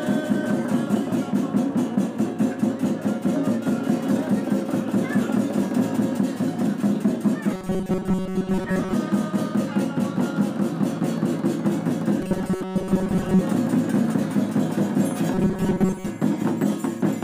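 Robotic sound from repeated short buffers occurs at 7.54 to 8.93 s, 12.21 to 13.41 s and 15.34 to 16.09 s. New audio likely arrived too seldom, so a stretch of about 5.3 ms was looped for most of each span, imposing a rigid, metallic 188 Hz buzz.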